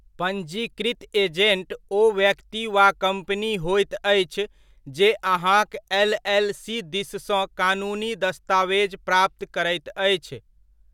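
No technical faults can be heard anywhere in the speech recording, and the signal stays stable and intact throughout.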